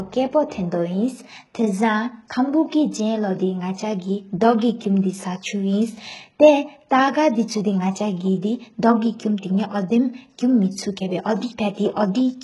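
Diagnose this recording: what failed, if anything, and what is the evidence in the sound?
The codec stage failed: the speech was likely squeezed through HE-AAC at a very low rate, consistent with about 12 kbps, and damaged heavily throughout. Its treble is rebuilt from copied lower bands, so s sounds turn gritty and lispy, and nothing is present above 11.5 kHz.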